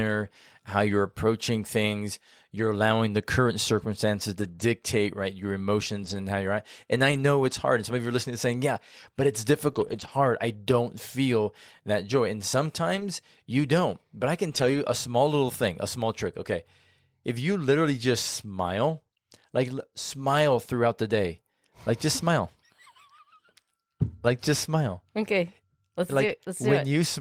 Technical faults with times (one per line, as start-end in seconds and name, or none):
4.39-4.62 lost packet rebuilt from error correction
4.51-4.60 short concealed packet loss
6.02-6.16 lost packet rebuilt from error correction
7.12-7.18 lost packet rebuilt from error correction
9.72-10.10 lost packet rebuilt from error correction
12.96-13.02 lost packet rebuilt from error correction
14.50-14.76 lost packet rebuilt from error correction
26.28-26.34 lost packet rebuilt from error correction